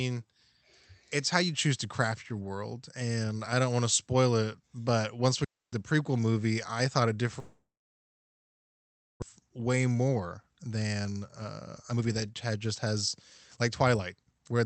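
A speech recording carried over a call path using Opus, band-limited to about 8 kHz, has three kinds of fault. First, a digital wireless dropout: the wireless link lost too much data at 5.44 s and the receiver muted for about 0.28 s. After "it but once we" there is a clean hole of near silence until 5.73 s, with no crackle or noise burst at either edge, before "prequel movie I thought" continues. Second, a long network dropout, likely caused by packets that stopped arriving. After "movie I thought it", at 7.39 s, the receiver briefly stretches the last sound into a fading buzz or hiss, then leaves mostly silence until 9.24 s. Around 1.0 s of speech never plays at all, and the speech resumes further on with that stretch missing. Third, jitter buffer speed-up: the late audio arrived in a bunch, leaving the buffer about 0.7 s deeper than its target, so the receiver trimmed it by repeatedly cutting out pitch-period-sized slivers. 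From 9.49 to 13.17 s the speech runs at about 116% speed, removing roughly 0.7 s. A milder pass from 13.61 to 14.60 s runs at about 108% and takes out around 0.1 s. In both, the pitch stays put while the delivery sounds rushed.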